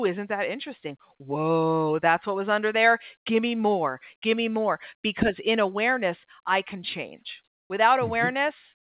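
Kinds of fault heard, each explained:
Comfort noise in place of the background: the sender likely halted transmission in a detected pause, leaving the receiver to synthesise filler, so for 140 ms from 7.56 s, just after "awareness I can change", the real background becomes flat, featureless noise about 26 dB quieter.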